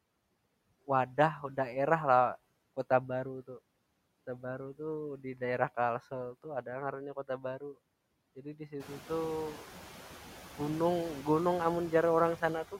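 A noise suppressor running through the whole speech recording pulls down the bands it judges to be steady noise by about 17 dB, frame by frame. The background drops away between phrases and returns beneath the voice, and the room noise climbs by about 14 dB around 9 s to sit roughly 17 dB under the speech.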